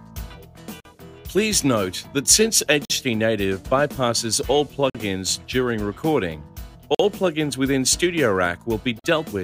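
Gaps between chunks occur at 0.80–0.85 s, 2.85–2.90 s, 4.90–4.95 s, 6.95–6.99 s and 8.99–9.04 s. The audio arrives in 2.0 s chunks with about 48 ms of silence inserted at each join. Nothing is lost, but the sound is cut by short holes at a steady two-second rhythm.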